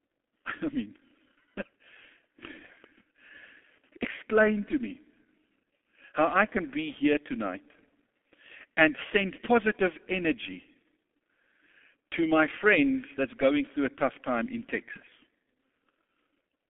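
From start to finish the speech carries G.723.1 codec damage, and it is heavy. Nothing reaches below 200 Hz or above 3.4 kHz, so the sound is muffled, and the coarse speech model, which fits a rate of about 6.3 kbit/s refreshed only every 30 ms, leaves a hoarse, buzzy grain and smeared consonants. A plain telephone band-limit would sound narrow but clean. Here the texture itself is degraded, not just the bandwidth.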